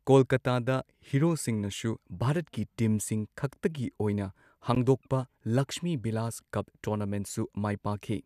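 At 4.75 s the speech drops out for about 13 ms, a brief hole with smeared edges before the sound resumes exactly where it stopped. This is a gap at a join of encoded pieces: separately encoded segments were spliced untrimmed, leaving encoder delay and end padding in place.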